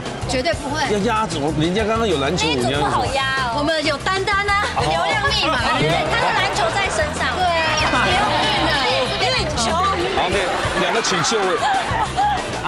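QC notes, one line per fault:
Throughout: resampler restarted on every block. A faint tick repeats at 10 Hz, heard only while sound is present, which points to each 100 ms block being resampled separately, likely from 24 kHz to 48 kHz. At each block edge the converter lacks the true neighbouring samples, so it leaves a small error there. On a spectrogram this shows as thin vertical broadband lines every 100 ms. The waveform shows tiny steps or kinks at the same spacing.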